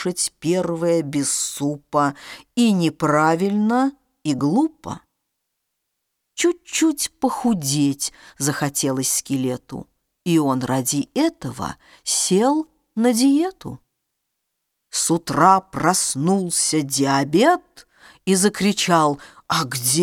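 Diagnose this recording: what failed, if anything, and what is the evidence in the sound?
Nothing failed in this recording, and the sound gives no evidence of a fault.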